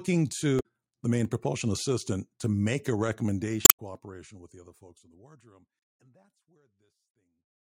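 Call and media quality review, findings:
Damaged data in the compressed stream, three hits: 0.56 to 0.66 s, 3.62 to 3.80 s, and a short one at 5.79 to 5.82 s. Decoder hits bad frames, loses sync and skips to the next good header. Suspect transport or storage corruption upstream of decode. The slow fade-out from about 3 s to the end is a normal edit.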